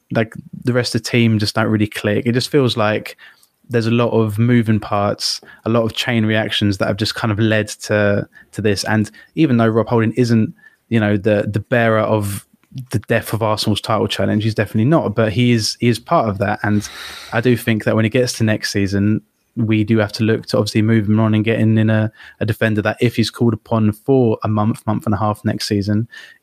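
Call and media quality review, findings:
Nothing stood out on listening to the speech in this clip.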